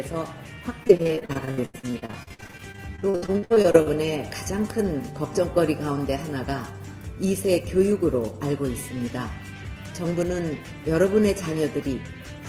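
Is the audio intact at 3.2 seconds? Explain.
No, 3.2 s falls within repeated packet loss (robotic sound) from 0.83 to 3.88 s: 40 gaps, up to 82 ms, patched by extending prior sound, giving choppy, robotic audio with stuttering, smeared blocks on a spectrogram.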